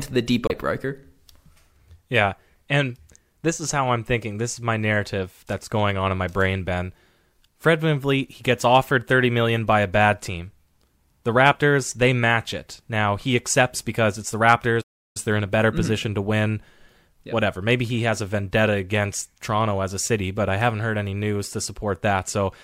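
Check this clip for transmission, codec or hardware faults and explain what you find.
Two faults are present in this speech recording, one near the start and one in the second half.

Damaged data in a compressed stream, 0.46 to 0.51 s: corrupted bytes in the encoded stream make the decoder misread a frame, lose sync and hunt for the next valid header. The result is a brief glitch lasting about 50 ms.

Playback stall, 14.81 to 15.17 s, just after "accepts because it's the": the speech cuts to silence for about 341 ms, then resumes. The likely cause is the player running out of buffered data or its thread being blocked, so output halted until data arrived again.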